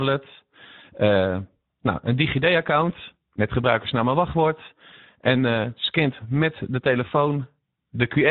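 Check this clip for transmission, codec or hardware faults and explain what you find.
Two faults are present in this speech clip: Speex codec damage across the whole recording, and one short dropout covered by packet loss concealment.

Speex codec, throughout: the speech sounds noisy and hoarse, with plainly audible coding damage. The sound fits a Speex setting around 11 kbps. At that rate the CELP coder has too few bits to model the excitation properly, so the voiced sound is rebuilt from a coarse approximation rather than the real signal. On a spectrogram, the harmonics look smeared and blurred where they should be clean, parallel lines, and there is a grainy noise floor between them.

VoIP packet loss concealed by the speech codec, 3.34 to 3.38 s, just before "gebruikersnaam en wachtwoord": the gap fits a single lost 20 ms packet. The decoder filled it by extending its last pitch and filter settings and lowering the gain frame by frame. 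This stretches the sound into a brief tone or coloured noise that fades. Because each frame builds on the one before, the following speech comes back weak or distorted. The waveform shows a small envelope dip with repetitive periodic cycles, and the spectrogram shows frozen, flat harmonics for that moment.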